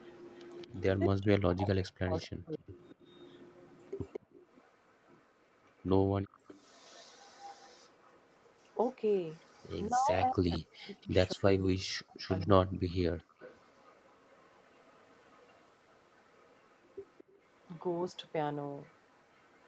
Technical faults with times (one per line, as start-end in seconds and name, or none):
0.00-0.82 echo leak
0.97-2.77 speech suppressed in double talk
2.14-9.89 echo leak
4.20-4.41 background gated by the echo canceller
9.89-12.80 speech suppressed in double talk
12.28-19.68 echo leak
13.24-13.38 background gated by the echo canceller